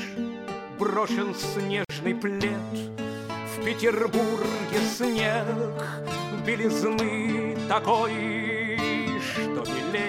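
A gap at a join of encoded pieces opens at 1.85 s and lasts about 49 ms, until 1.89 s. Two separately encoded sections were butted together untrimmed, so encoder delay and last-frame padding leave a brief silence with smeared edges before the sound resumes where it stopped.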